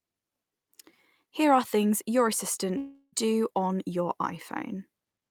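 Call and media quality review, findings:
Block size mismatch (truncated), whole clip: a stage writes longer blocks than the next reads, so each block's tail is discarded. This gives a steady 46.9 Hz buzz, which fits 1024-sample blocks at 48 kHz. Speech runs at normal speed and pitch.

Long network dropout, likely cause, 2.77–3.15 s, after "are things your": incoming audio stops and the receiver extends the last sound, fading, for about 0.35 s, then near-silence. Speech resumes with roughly 0.36 s missing.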